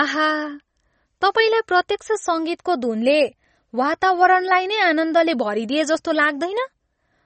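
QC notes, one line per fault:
throughout: MP3 compression. Nothing sits above 8.4 kHz, a hard flat ceiling on the spectrogram, and the speech carries a plainly audible watery swirl from weak bands dropping in and out, likely a starved MP3 encoder, which fits roughly 32 kbps.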